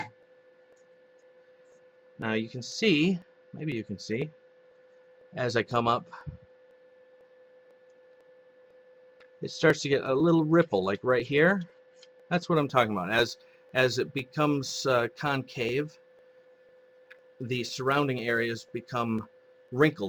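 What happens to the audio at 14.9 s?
Sample clock jitter is present at 14.9 s; it begins at 12.55 s and runs to the end of the clip. The converter's clock wanders, so each sample is captured a few microseconds early or late at random, and the timing error becomes an amplitude error wherever the waveform is changing quickly. The result is a grainy hiss riding on the sound at around 30 dB below it, strongest on loud, bright passages and absent in quiet gaps.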